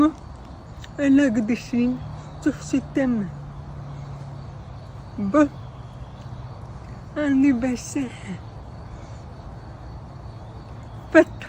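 No dropouts, distortion, level jumps or other transport or processing faults can be heard anywhere in the recording.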